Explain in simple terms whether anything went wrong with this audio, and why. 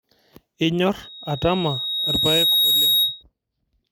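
A thin, piercing whistle creeps in at 1.03 seconds, swells over about a second and a half until it is louder than the speech, and stops at 3.23 seconds. This is loudspeaker feedback squeal. The microphone was picking up the loudspeaker it was feeding, so the sound went round and round the loop. At one pitch, around 3.8 kHz, each trip came back a little louder than the last, and that single tone kept growing into a squeal.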